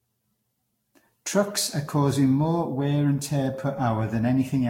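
Throughout the speech there is a swirly, smeared, hollow quality, with blurred consonant attacks and nothing above 16.6 kHz. This is generation loss, likely from around seven passes through a lossy codec at roughly 60 kbit/s, probably Vorbis, each pass adding fresh artefacts.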